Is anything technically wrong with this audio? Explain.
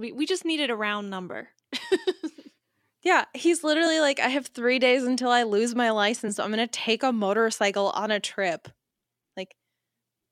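Yes, the speech has compressed frames skipped at 1.40, 3.86, 6.27 and 9.69 s. At each point, whole coded frames of about 23.2 ms never got played, probably lost from the file or rejected by the decoder as damaged, so the audio jumps forward. The first skip drops a couple of frames, roughly 50 ms. The later three each lose about one frame, around 20 ms. Each join is heard as a sudden jump in the speech.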